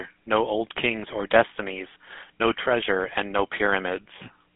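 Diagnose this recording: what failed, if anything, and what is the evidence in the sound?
The codec stage failed: this speech was passed through the GSM full-rate codec. The buzzy, gravelly roughness runs throughout and is plainly audible. Nothing survives above about 3.5 kHz or below 150 Hz. Pulse-driven vocal-tract modelling causes this, and it fits a 13 kbps rate.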